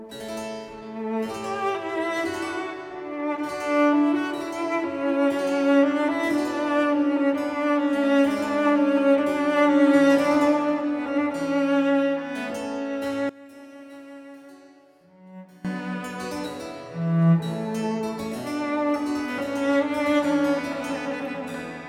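Between 13.29 and 15.65 s the level falls by about 20 dB, its shared centre content largely cancelled. This fits one channel inverted: likely a polarity flip on one stereo channel, so shared content cancels in a mono sum.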